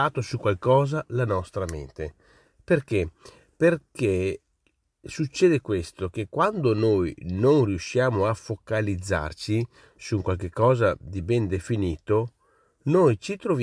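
No technical faults can be heard anywhere in the recording; the signal stays steady and intact throughout.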